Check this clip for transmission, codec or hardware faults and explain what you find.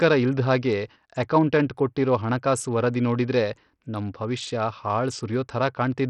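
One codec fault is present, running through the whole speech clip. Bluetooth SBC compression is the likely cause: the sound has a gritty, grainy texture with aliasing riding on it, and the upper treble is unstable, thinning and flickering. The degradation is heavy, which fits a starved bit pool near 64 kbps. The encoder splits the signal into a few wide sub-bands and, with so few bits, leaves the weak top bands nearly empty while coarsely quantising the rest. Content still extends to about 20.6 kHz.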